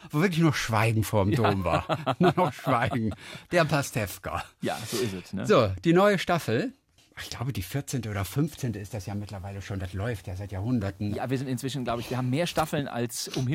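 A display or video cable coupling into the audio path puts video or display buzz into the sound from 8.60 to 12.92 s: a buzz at the 75 Hz field rate with hash above it, sitting about 30 dB below the signal.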